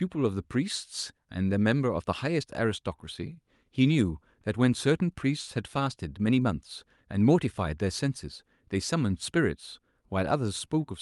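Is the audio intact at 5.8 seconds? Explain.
Yes, the audio is intact at 5.8 seconds, with no dropout, glitch or other fault at that moment.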